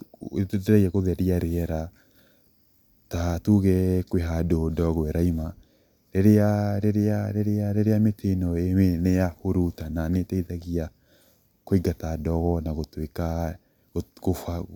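Nothing wrong is audible anywhere in this recording.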